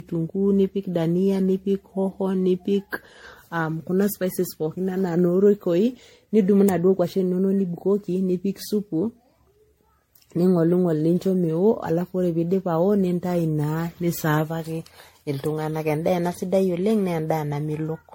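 Speech with generation loss throughout: swirly, hollow and smeared, with blurred consonant attacks, likely from about fifteen passes through an MP3 codec at a rate near 64 kbit/s. A spectrogram shows a hard ceiling at 16.5 kHz and patchy spectral holes, and waveform transients look softened.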